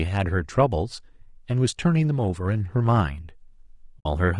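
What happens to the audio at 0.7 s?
Low-delay AAC compression is audible at 0.7 s and throughout the clip: the speech sounds rough and grainy, likely from short AAC-ELD frames, fitting about 32 kbps.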